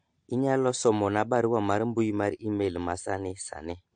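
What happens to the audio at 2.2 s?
At 2.2 s the speech sounds dull and smeared, with a fizzy, warbling edge on sibilants, as it does throughout the clip. This is likely AAC compression at a low bitrate, around 32 kbps. At that bitrate the encoder lowers its cut-off, removing everything above 9 kHz. On a spectrogram the region above 9 kHz is empty.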